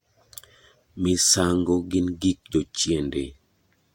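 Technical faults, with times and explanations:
The speech signal stays continuous and intact, with no technical faults to report at any point.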